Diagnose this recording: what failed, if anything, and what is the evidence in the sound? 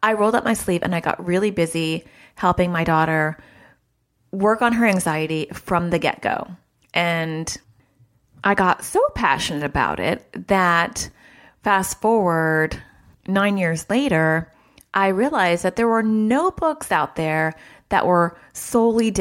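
Nothing stood out on listening to this speech recording, and no stage of the chain gave any audible sign of having failed.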